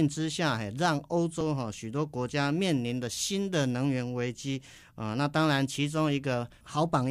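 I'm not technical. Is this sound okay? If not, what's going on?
No. At 1.41 s the speech jumps forward slightly, as if a tiny sliver was snipped out. This is likely a dropped buffer (overrun): the recording software fell behind, a fraction of a second was overwritten, and the two ends were joined.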